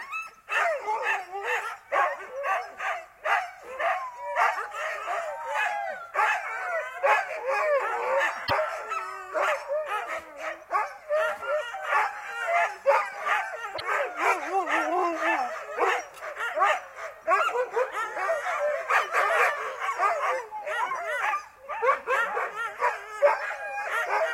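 A brief glitch breaks through at 8.44 to 8.51 s, and again at 13.74 to 13.81 s, each under a tenth of a second. Both come from damaged data in a compressed stream: corrupted bytes leave the decoder misreading frames until it resynchronises on a valid header.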